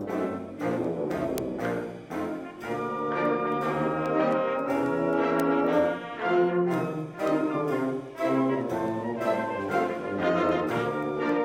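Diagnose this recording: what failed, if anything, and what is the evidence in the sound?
A receiving converter was running on its own clock rather than locking to the incoming digital stream, so the two clocks drifted apart by something like a hundred parts per million. Each time they slipped past each other, a single sample was dropped or repeated and its neighbours misread. The sound carries these word clock ticks: about forty sharp, uneven clicks from 0.31 s to 11.29 s, recurring at a steady interval of about 0.3 s.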